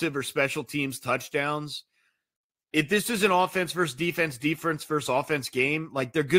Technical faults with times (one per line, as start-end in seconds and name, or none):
none